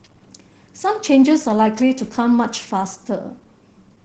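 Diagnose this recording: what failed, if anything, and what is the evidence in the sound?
The codec stage failed: Opus voice compression, running in its SILK linear-prediction mode, has coded this speech at a rate low enough to do plainly audible damage from start to finish. The band stops at about 8 kHz, so sibilants and breath lose their top, and the excitation is quantised coarsely, leaving the voice hoarse, muffled and faintly robotic. That degree of damage points to a low bitrate of around 12 kbps.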